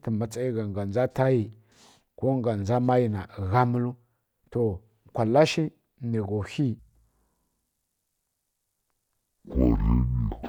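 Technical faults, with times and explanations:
6.79–10.49 s, stereo read as mono: from 6.79 s to the end the speech suddenly drags at half speed and drops a full octave, 12 semitones, giving a slow, deep sound, with a fainter mirrored copy of it in the upper half of the spectrum. A two-channel stream is being treated as one channel, so left and right samples are played one after another. Every moment therefore takes twice as long, and each frequency is halved.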